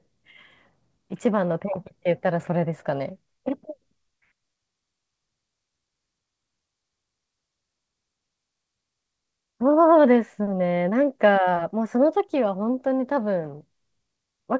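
No technical faults can be heard; the speech has come through a call path whose codec leaves nothing above 8 kHz, consistent with G.722 wideband coding, and the jitter buffer introduces no gaps or timing disturbances.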